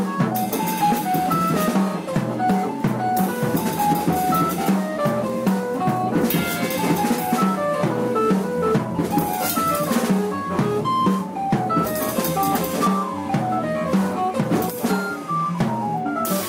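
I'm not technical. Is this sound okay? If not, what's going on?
No. For the first 1.7 seconds, from 0.0 to 1.71 s, there is crude rate conversion. The audio was converted to a new sample rate by copying the nearest existing sample instead of smoothing between them. That adds a gritty, unrelated buzz that follows louder and brighter moments.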